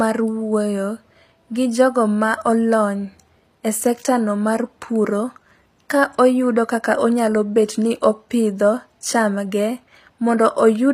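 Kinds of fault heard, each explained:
HE-AAC compression: the top of the spectrum sounds synthesized rather than recorded, with the treble gritty and metallic on s sounds, and nothing above about 15.4 kHz. This is likely spectral band replication: only the lower band is coded, and the treble is rebuilt by copying lower content upward under a coarse envelope, so its harmonics do not line up with the real ones. The damage is plainly audible across the whole speech clip, consistent with an HE-AAC v2 stream around 24 kbps.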